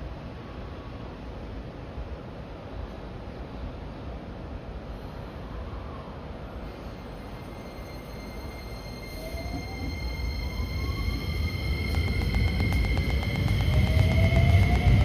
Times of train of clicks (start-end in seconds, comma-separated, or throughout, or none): 11.95-15.02